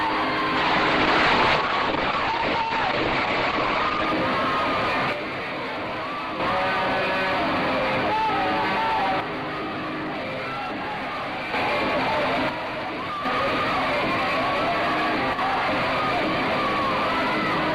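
From 0.57 to 4.13 s a call bitrate drop, from 64 to 9 kbps, leaves the sound coarse and muffled; the spectrogram shows everything above 8 kHz cut away.

At 5.13–6.40, 9.20–11.54, 12.49–13.25 and 15.33–15.39 s the level steps down by about 6 dB, visible as abrupt waveform dips, likely one channel dropping out.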